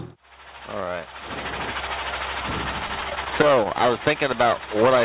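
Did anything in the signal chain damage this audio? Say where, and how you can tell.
Yes: repeated stalls (stutter) at the network and jitter buffer, 2.88 to 3.91 s. Late packets emptied the buffer eleven times, each gap at most 15 ms, bridged by continuing the last sound. A spectrogram shows brief smeared repeats across the band below 4 kHz.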